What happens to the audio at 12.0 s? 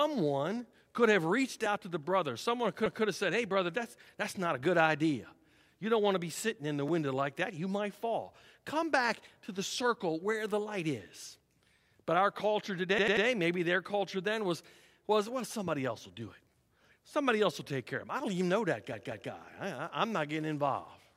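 Nothing goes wrong at 12.0 s; the speech runs through that moment intact, with no dropout, click or distortion to be heard.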